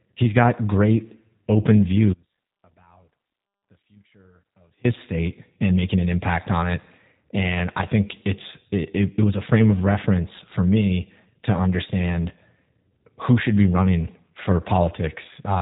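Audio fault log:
Throughout, G.729 codec: speech sounds band-limited, slightly rough and synthetic, nothing above about 3.8 kHz, from 8 kbit/s vocal-tract-and-pulse reconstruction.
2.13 to 4.84 s, audio dropout to a faint residue: sound abruptly cuts out for 2.7 s leaving only a faint trace roughly 35 dB down, likely a lost signal on a still-live path.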